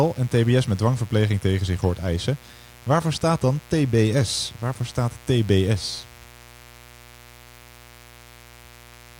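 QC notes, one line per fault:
Throughout: mains buzz. A steady, raspy 60 Hz buzz sits under the speech at about 25 dB down. The gritty edge comes from sharp spikes at twice the mains rate, so harmonics stack up well into the kHz range rather than staying a clean low hum.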